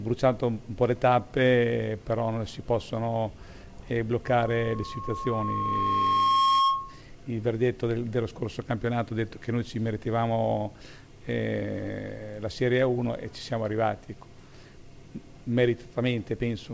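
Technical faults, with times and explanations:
4.24 to 7.02 s, loudspeaker feedback squeal: a single tone near 1.1 kHz swells over about two seconds to roughly 5 dB above everything else. The mic is picking up its own loudspeaker, and at that frequency the loop gain tops one, so the tone keeps feeding itself.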